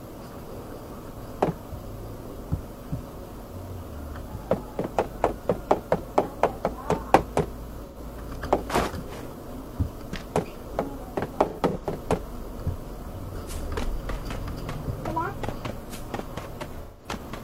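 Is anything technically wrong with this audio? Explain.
Yes. AAC frame loss with concealment occurs at 7.86–7.97 s, 11.48–11.84 s (scattered losses, longest run about a tenth of a second) and 16.82–17.09 s. The decoder rebuilds missing frames from the last good spectrum, leaving brief smeared, noisy, phasey patches.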